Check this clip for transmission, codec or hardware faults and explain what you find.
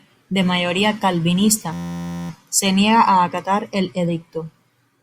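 One hardware fault is present. From 1.73 to 2.30 s the speech gives way to a steady, rasping buzz at 86.1 Hz. This is a system hang loop: playback froze while the sound hardware kept replaying the same 11.61 ms segment, which fits a 512-sample ring buffer, around 49 times over.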